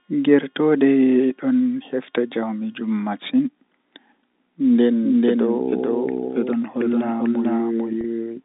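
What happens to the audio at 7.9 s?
At 7.9 s you're hearing a doubled audio track: from 5.03 s right through to the end, the speech plays twice, with a second full-band copy trailing roughly 400 ms behind at about the same level. It jumps in abruptly and carries no decay or room colour, so it reads as a clean echo rather than reverb. That's likely the same signal being picked up again over a slower path, all within the narrow telephone band of the G.711 line.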